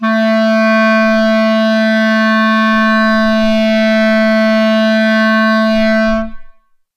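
Nothing goes wrong anywhere in this bit of music; there's just no fault to point to.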